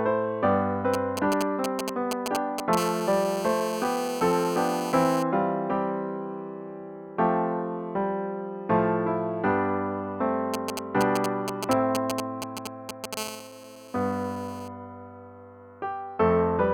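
A galloping dit-dit-dit of short 217 Hz buzzes, nearly as loud as the audio itself, runs from 0.94 to 2.75 s and again from 10.54 to 13.15 s. These are GSM signalling bursts: a nearby 2G phone exchanging brief radio bursts with the network, which the audio circuitry rectifies into sound. Each time, the pattern gives way to a hard, raspy, steady 217 Hz buzz full of harmonics, from 2.77 to 5.23 s at about 11 dB below the audio and from 13.17 to 14.68 s at about 14 dB below. This is GSM phone buzz, from the phone transmitting continuously in its call state at 217 bursts per second, with each radio pulse demodulated into the audio path.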